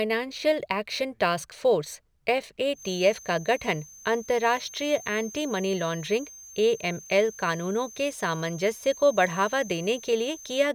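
From 2.72 s, just after "टास्क फ़ोर्स एफ़ ए", to the end, a thin single-pitch 6.3 kHz feedback whistle that slowly swells and fades sits well below the speech, likely a loudspeaker-microphone loop held at the edge of ringing.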